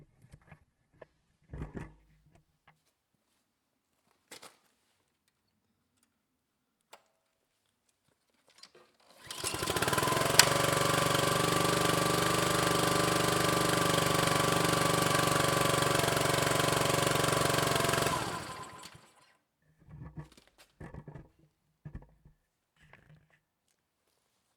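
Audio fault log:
0.0–2.0 s adaptive stream starting at a low bitrate: dull, artefact-heavy sound, fitting roughly 12 kbit/s Opus, then an abrupt, gapless lift once the player switches to about 64 kbit/s.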